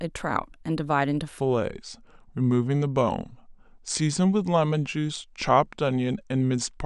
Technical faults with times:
1.40-6.86 section at the wrong speed

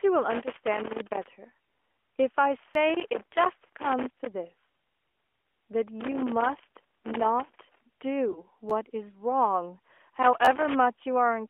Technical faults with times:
0.30-1.26 loose connector crackle
2.74 repeated buffer
6.01-7.81 loose connector crackle
8.32-8.43 lost AMR speech frames
8.70 repeated buffer
10.22-10.75 loose connector crackle
10.45-10.47 repeated buffer

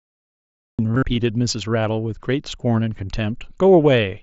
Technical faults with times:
0.00-0.79 cut-off start
0.92-1.03 concealed Bluetooth headset packet loss

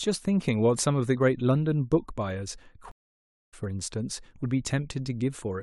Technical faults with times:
2.91-3.54 stream reconnect

